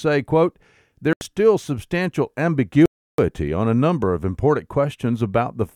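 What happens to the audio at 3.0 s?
From 2.86 to 3.19 s the speech cuts to full silence for about 0.33 s, then resumes. This is likely a Bluetooth stall: delayed wireless packets emptied the headphones' buffer. Unlike brief packet-loss glitches, there is no smeared or repeated fill, just a clean, dead gap.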